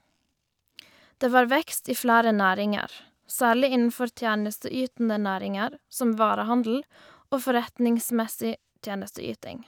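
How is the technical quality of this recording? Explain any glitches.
No glitches or technical faults.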